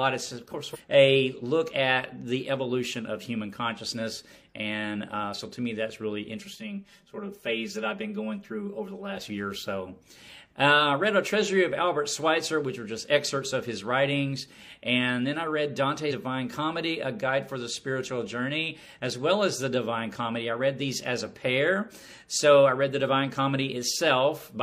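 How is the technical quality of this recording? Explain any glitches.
Two glitches are audible. From 0.70 to 0.77 s there is damaged data in the compressed stream: corrupted bytes make the decoder lose sync and hunt for the next frame, giving a short glitch. From 6.40 to 9.17 s, channel delay causes comb filtering: one channel lags by around 5 ms before mono summing, cancelling evenly spaced frequencies from roughly 100 Hz upward, so the sound turns hollow and phasey.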